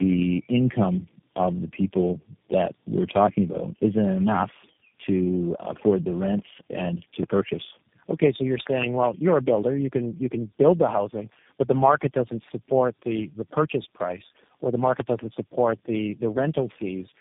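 Throughout, the speech sounds rough, noisy, muffled and warbly, with nothing above 3.7 kHz. This is tandem speech coding: four coders in a row, each re-encoding the last one's degraded output.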